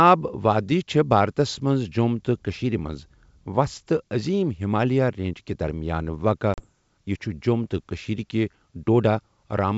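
At 6.54 to 6.67 s, between "رینج کہِ درمیان واقع" and "یہٕ چھُ جۆم تہٕ", packet loss on an ADPCM call drops about 40 ms of speech, a couple of packets. The waveform shows a flat, hard-edged gap and the spectrogram a blank vertical band. The decoder's predictor and step size then fall out of step, so speech resumes slightly distorted before settling.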